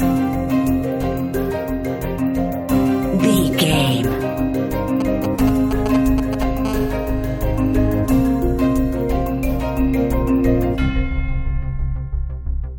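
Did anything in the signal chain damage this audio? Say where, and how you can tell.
Yes, in the analogue wiring. From 5.00 to 6.66 s there are GSM signalling bursts: galloping dit-dit-dit ticks and brief buzzes at 217 Hz, nearly as loud as the wanted audio. A nearby 2G phone's radio pulses are being rectified by the analogue circuitry.

Right after, from 6.66 to 8.01 s, it becomes a steady GSM phone buzz, a hard, raspy 217 Hz tone full of harmonics at about 18 dB below the signal. The phone has gone into a call, transmitting in bursts 217 times a second, and the same analogue stage keeps demodulating it.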